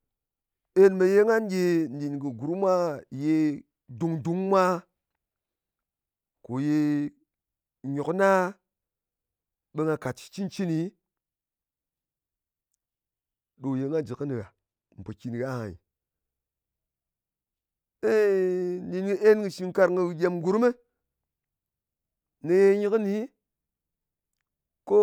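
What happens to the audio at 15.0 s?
At 15.0 s the speech is inside a stretch of channel delay (comb filtering) running from 13.81 s to 15.14 s. One channel trails the other by roughly a single sample, about 0.02 ms, and when the two are summed to mono the shared content cancels at evenly spaced frequencies. With so short an offset the first notch falls up near 20 kHz, so the effect is a dulling of the very top end.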